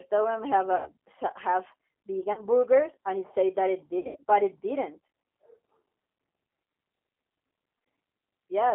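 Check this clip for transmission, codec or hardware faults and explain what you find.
The speech carries two faults: coding damage from a low-bitrate speech codec throughout, and three concealed packet-loss events.

G.729 codec, throughout. The audio is confined to roughly 250 Hz to 3.4 kHz, and the coding damage is plainly audible. The character fits G.729A at about 8 kbit/s. That codec resynthesises speech from a short-term spectral filter, a pitch predictor and a sparse pulse excitation. Because the waveform is rebuilt rather than preserved, voiced sounds take on a rough, slightly synthetic edge, and anything that isn't clean speech warbles.

VoIP packet loss concealed by the speech codec, at 0.76 to 0.92 s, 2.33 to 2.44 s and 3.99 to 4.23 s. The first gap covers 100 ms of missing audio and the second covers 40 ms, consistent with five and two lost 20 ms packets. The third spreads 160 ms of loss over about 200 ms, with the longest unbroken run at 80 ms. 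In each gap the decoder keeps replaying its last pitch and filter state at falling gain, so the sound smears into a fading buzz. Because every frame depends on the one before, the level and timbre stay off briefly after audio resumes.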